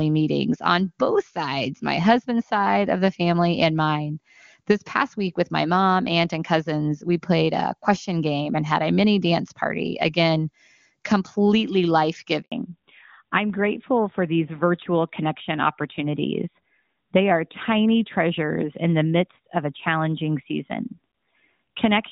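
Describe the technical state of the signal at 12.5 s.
At 12.5 s the signal is inside a handover gap. It runs from 12.42 to 12.52 s, about 100 ms. The call switched networks and no speech frames arrived meanwhile. The speech fades within milliseconds and falls silent until the new link starts.

Right at 12.52 s comes a fallback to narrowband. It lasts to the end of the clip. Before the switch the wideband codec sounded clean, which fits HD Voice near its top rate. Afterwards nothing above 4 kHz survives. The speech turns duller and rougher, consistent with an older narrowband codec.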